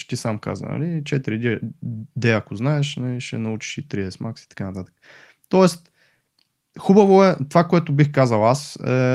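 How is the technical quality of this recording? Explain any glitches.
Listening closely, nothing in the recording stood out as a technical problem, so there are no glitches to explain.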